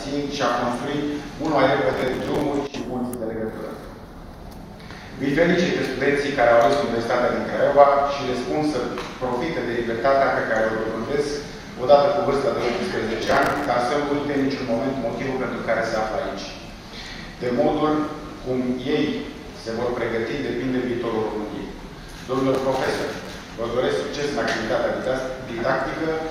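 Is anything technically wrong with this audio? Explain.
Yes. Processor overload crackle at 1.93–2.41 s, 13.23–13.66 s and 22.53–23.41 s: missed buffer deadlines of about 5 ms repeat stale audio, giving gritty tearing that, unlike clipping, ignores loudness.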